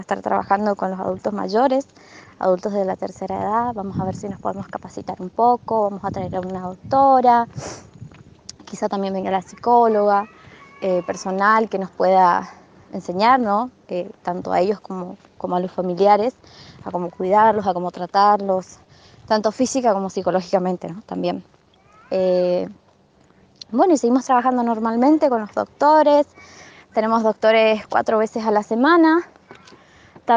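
No technical faults can be heard anywhere in the audio, and the signal holds steady throughout without any disturbance to its level, timing or continuity.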